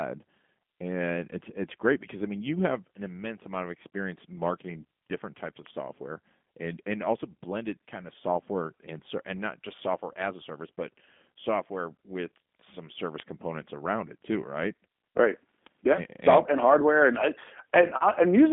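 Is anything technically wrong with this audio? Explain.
Yes. The speech is coded with G.729 throughout the clip. The codec models each 10 ms frame as a vocal tract filter and a pitch predictor driven by a few pulses rather than sending the waveform itself. The voice survives but sounds plainly rough and synthetic. The sound sits in a telephone band of about 200 Hz to 3.5 kHz, with nothing above 3.6 kHz, which fits a low-rate VoIP link around 8 kbit/s.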